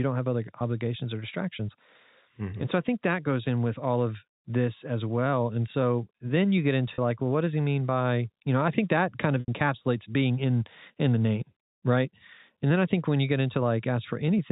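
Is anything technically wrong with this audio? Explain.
Yes. Packet loss with pitch repetition occurs twice in this telephone-band speech, whose G.711 coding cuts everything above 4 kHz. From 6.94 to 6.98 s, after "so then you get", about 40 ms went missing, which fits two 20 ms packets. The receiver bridged it by repeating the last pitch period, so the voice briefly holds a buzzy tone before "like well what does". At 9.40 to 9.48 s, after "think that kind of", an 80 ms gap gets the same repetition, fades toward silence and cross-fades back.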